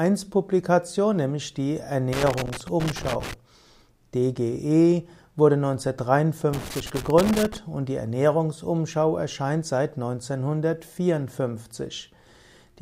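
Two bursts of loose connector crackle occur, from 2.13 to 3.34 s and from 6.53 to 7.57 s. A worn or dirty contact is making and breaking as it shifts, chopping the signal into irregular scratching and crackle, with pops where the line carries DC.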